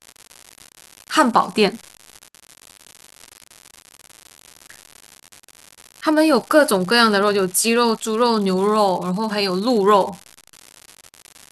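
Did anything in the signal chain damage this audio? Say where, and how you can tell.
Yes. A steady crackle-and-fizz runs through the whole speech clip, from start to finish, and it carries on unchanged in the pauses where nothing else is sounding. That points to the converter or its digital data interface: an unreliable data bit. One data line is marginal, so its bit flips at random in a share of samples, and each flip adds a spike of identical size, about -19 dBFS. The result is constant clicks that ignore the programme level.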